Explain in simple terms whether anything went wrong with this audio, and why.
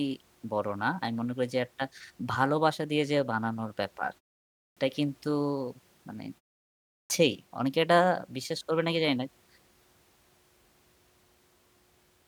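Two spots have a clipped start after a pause. At 4.64 s, after about half a second of quiet, the speech jumps in abruptly with roughly the first 130 ms missing, and the same happens at 6.97 s after a pause of about 0.65 s. The playback device dozes off during silence and needs a moment to wake up, so the opening sounds get swallowed.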